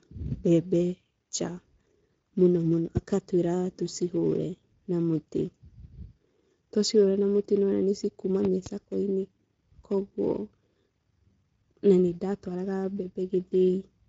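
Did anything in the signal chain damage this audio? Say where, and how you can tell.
Yes. The codec stage damaged it. This is Speex codec damage, and it runs through the whole clip. The speech sounds coarse and hoarse throughout. The codec has too few bits to rebuild the excitation cleanly. Nothing is present above 7.7 kHz. That cut-off points to wideband Speex at a middle quality setting, which fits a bitrate of about 16.8 kbps. The degradation is plainly audible, not subtle.

There are also two loud pop events, which come from the analogue wiring or driver stage. The first is a single sharp pop from 2.97 to 2.99 s, around 15 dB above the speech. The second runs from 8.45 to 8.69 s and contains two pops in quick succession, about 10 dB above the signal. The speech carries on underneath both. The likely cause is a sudden voltage step from a plug, switch or static discharge being added to the signal path.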